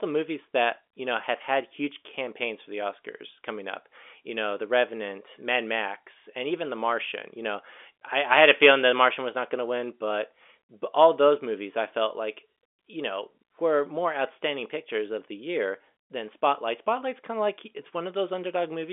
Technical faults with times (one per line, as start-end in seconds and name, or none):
none